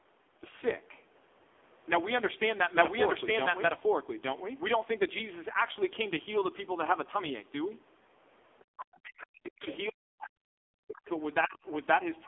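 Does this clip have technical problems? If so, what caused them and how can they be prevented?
Yes, there are four kinds of problem here.

The whole clip carries the sound of the AMR narrowband mobile codec. Nothing gets through above about 3.8 kHz, and the speech sits in a narrow 300 Hz to 3.5 kHz phone band. The codec damage is heavy: the voice is buzzy and synthetic, as if a vocal-tract model were being driven by too few pulses per frame, which points to a very low bitrate of around 6 kbps. Prevent it by carrying the call on a wideband codec, or at least a higher AMR rate.

From 2.73 to 4.59 s there's a doubled audio track. A second full-band copy of the speech runs about a second behind, at roughly the same level, with no decay or room colour, and it starts and stops abruptly. That's likely a second capture path or an edit that left two out-of-step copies in the mix. Prevent it by checking routing and edit timelines so only one copy of the source is ever summed in.

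Then there's the other side's voice leaking through, in short scraps at 8.59–8.63 s, 9.18–9.27 s, 9.62–9.76 s, 11.06–11.10 s and 11.42–11.47 s, at roughly 35 to 15 dB below the talker. The likely cause is the far end playing on a loudspeaker while the echo canceller fails to remove all of it from the mic. Prevent it by using a headset or by improving the echo canceller's tuning and loudspeaker-to-mic isolation.

Finally, there's speech suppressed in double talk at 8.70–9.67 s, 9.89–11.07 s and 11.46–11.62 s. The talker's voice dips hard, by up to about 40 dB. The likely cause is both sides talking at once, with the echo canceller unable to separate them and so clamping everything down. Prevent it with a double-talk-capable echo canceller, or by having callers use headsets so there's less echo to fight.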